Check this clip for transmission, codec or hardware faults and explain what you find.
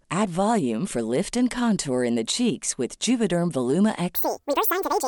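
One fault. From 4.15 s to the end, the speech jumps an octave higher and runs twice as fast: a wrong sample rate, consistent with 24 kHz audio played back at 48 kHz.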